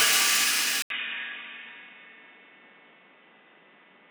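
A short recording of everyday sound. At 0.82 s there is a gap of 80 ms, and from then to the end the sound is dull and boxy. Nothing above 3.8 kHz comes through after the gap. A faint new background noise also appears, around 30 dB below the sound. The level stays much the same. This is likely an input switched to a poorer device, such as another microphone or a headset's call profile, with a narrower band and its own noise.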